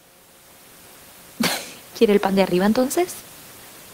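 Nothing's going wrong technically with this bit of speech; there's just a faint bed of room noise sitting about 27 dB below it, which is simply the sound of the space the microphone was in.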